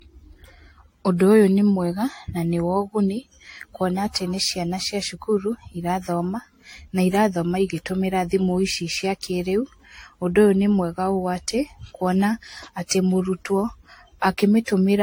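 Throughout the speech, the sound is swirly, smeared and hollow, with blurred attacks and nothing above 16.6 kHz. The likely cause is generation loss: around five lossy re-encodes, each requantising on a shifted frame grid so noise and spectral holes accumulate, consistent with AAC-LC near 64 kbit/s.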